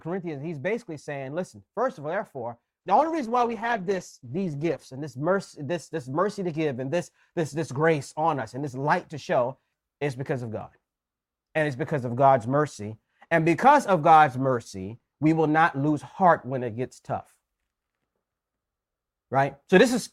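A speech recording with an adaptive stream at a lower bitrate from 2.81 to 4.81 s, between "first of all therefore" and "and this mercy this". The quality abruptly drops and codec artefacts rise, fitting a switch from roughly 64 to 12 kbit/s Opus. The waveform has no gap.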